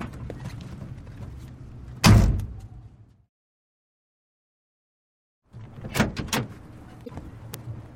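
At 7.02 to 7.10 s, damaged data in the compressed stream garbles about 80 ms. The decoder misreads corrupted frames and resyncs.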